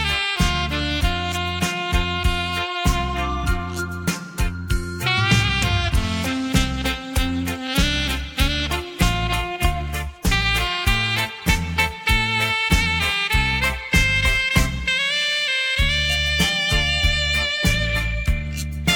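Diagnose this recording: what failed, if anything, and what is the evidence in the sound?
Nothing failed: no stage in the chain, from wiring and conversion through to storage and playback, leaves any audible evidence of a fault anywhere in the recording.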